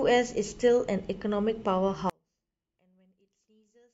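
From 2.10 s to the end of this short speech recording, the sound collapses almost to nothing, dropping by about 39 dB and leaving only a faint residue where the centred speech should be. The likely cause is one channel inverted: one side of the stereo pair has reversed polarity, so the nearly identical content in both channels cancels when they are summed to mono, and only their small difference survives.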